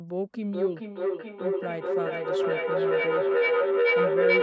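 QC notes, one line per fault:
0.52–4.42 s, feedback howl: a tone of about 500 Hz rises out of the speech and keeps building until it peaks at about 6 dB above the speech level. The repeats come roughly every 400 ms. A microphone was picking up a nearby loudspeaker on the same call, and each pass around that loop added gain, so the repeats grew and narrowed to the frequency the loop favoured. The loop is never broken, and the howl runs to the end of the clip, with nothing above 8 kHz from the call's microphone processing.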